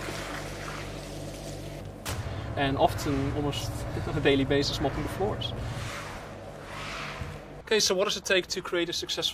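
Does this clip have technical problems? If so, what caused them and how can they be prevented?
No, I can't hear any technical problems in this clip.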